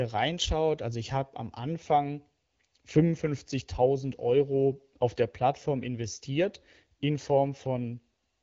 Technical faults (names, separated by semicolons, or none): none